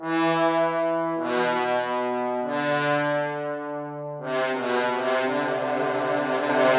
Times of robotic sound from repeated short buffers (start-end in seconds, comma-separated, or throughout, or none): none